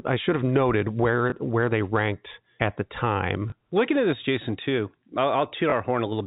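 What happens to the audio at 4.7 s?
Nothing goes wrong at 4.7 s: the speech carries on intact through that moment, with only the usual telephone-band sound of G.711 coding, which stops everything above 4 kHz.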